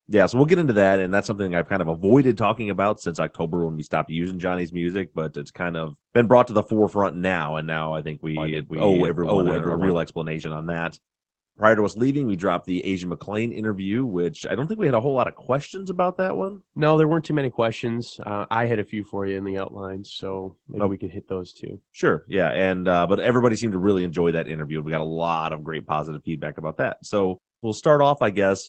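Opus voice compression runs through the whole clip, with plainly audible damage. The coder models the speech with linear prediction and cuts the band at 8 kHz. The excitation is coded coarsely, which fits a bitrate near 12 kbps. The speech sounds muffled, hoarse and slightly robotic.

From 8.37 to 9.91 s, a doubled audio track appears. A second full-band copy of the speech trails about half a second behind, at roughly the same level. It has no decay or room colour. It starts and stops abruptly. The likely cause is a second capture path or an edit holding two copies out of step.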